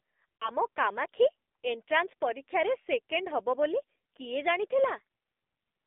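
A short speech clip that's been through an AMR narrowband mobile codec the whole way. The band runs only from about 250 Hz to 3.6 kHz, and the voice has that buzzy, synthetic edge you get from the pulse-driven vocal tract model at a low bitrate, which fits one of the lower modes around 7.4 kbps. At 0.36 to 0.52 s there are lost AMR speech frames. The decoder papers over a gap that sounds like about two frames, roughly 40 ms, by replaying the last good pitch and filter settings at falling gain. You hear a brief smeared warble and dip, then a momentarily weak or rough recovery.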